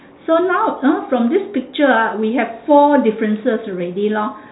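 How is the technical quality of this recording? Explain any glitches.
No glitches can be heard anywhere in the recording. The speech carries the narrow, boxy character of an ordinary telephone line, with nothing above about 3.9 kHz, which fits G.711 telephone coding at 64 kbps.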